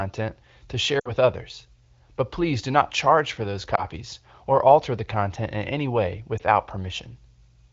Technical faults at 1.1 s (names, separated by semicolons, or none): lost AMR speech frames